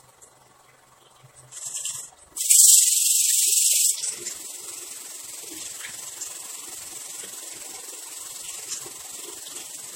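A recording of everyday sounds carries a fast, rough flutter from start to finish, the level dipping by about 6 dB roughly twenty times a second. That rough tremolo is overlap-add ripple: the audio was cut into windowed frames and rejoined with an overlap whose gains don't add to a steady level, so loudness pulses once per frame. The whole clip also sounds swirly, smeared and hollow, with softened attacks and nothing above 16.5 kHz. This is likely generation loss, with the sound decoded and re-encoded around five times through MP3 at rates that point to about 60 kbit/s. Each pass quantised on a shifted frame grid, so noise and spectral gaps piled up beyond what a single encode would leave.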